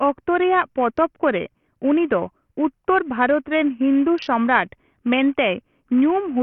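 From start to finish the speech carries heavy grit and flickering treble, with nothing above 16.8 kHz, damage that fits a starved 48 kbps stream and points to likely Bluetooth SBC compression. The top sub-bands drop in and out as bits run short, leaving coarse quantisation noise and aliasing rather than an MP3's swirly, smeared pre-echo.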